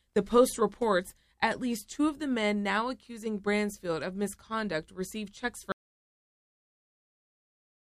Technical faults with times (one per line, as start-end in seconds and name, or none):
5.72-7.84 audio dropout to silence